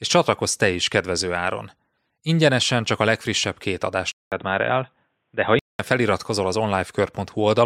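A speech clip in which, after "csak a legfrissebb két", the sound drops out for 200 ms at 4.12 s and then returns dull and boxy, with nothing above 3.8 kHz and a faint new noise floor far below the speech, at much the same loudness. It clears up again at 5.79 s, before "feliratkozol az". This is likely an input switched to a poorer device. A spectrogram would show a short blank gap, then a band with its top sliced off flat at 3.8 kHz.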